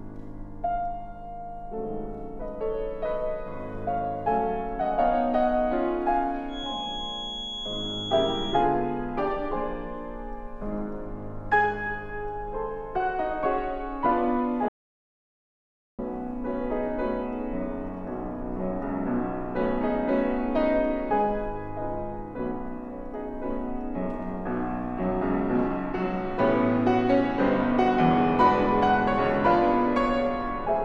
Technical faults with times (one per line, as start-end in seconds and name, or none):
6.46-8.68 feedback whistle
14.68-15.99 audio dropout to silence